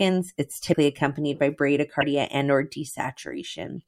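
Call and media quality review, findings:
Speech skips forward with a brief garbled disruption, about 32 ms each, at 0.72 s and 2.00 s. Likely a broken MP3 bit reservoir in the decode path: frames dropped, next frame borrows back-reference bytes from the wrong frame, first frame after the gap decodes as garbage. Span is about 1.2 MP3 frames of 26 ms.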